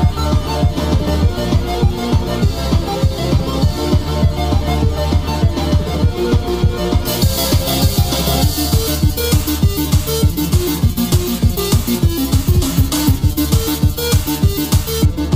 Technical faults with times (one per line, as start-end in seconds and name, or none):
7.05-15.05 pre-emphasis left on